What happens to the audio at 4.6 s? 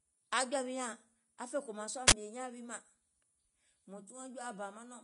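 At 4.6 s the speech sounds hissy and grainy, with nothing above 10.6 kHz, likely from Vorbis compression at a low rate (around 31 kbps), which replaces fine treble detail with noise. That grain, not just dullness, sets it apart from a plain low-pass.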